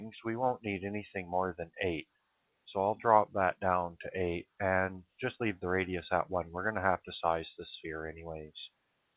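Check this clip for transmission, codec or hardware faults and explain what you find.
One fault stands out, on top of a narrowband call path whose top end stops at 4 kHz, which fits G.711 A-law at 64 kbps. From 1.61 to 1.76 s, a stretch of roughly 150 ms, the sound sinks, by about 20 dB at its deepest, then returns. This is sound cut by the noise suppressor: it mistook this stretch for background noise and pulled its gain down hard.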